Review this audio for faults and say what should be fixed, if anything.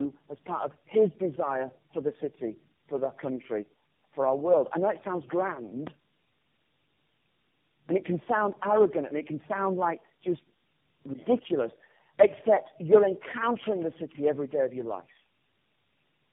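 Tandem speech coding runs throughout. The speech is rough, muffled and warbly, with nothing above 3.7 kHz. This points to four speech codecs in a row, each recoding the previous one's errors. To prevent it, carry the coded speech end to end without decoding and recoding at each link.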